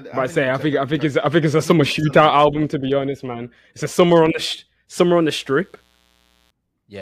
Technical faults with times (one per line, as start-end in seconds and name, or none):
5.00-6.50 mains buzz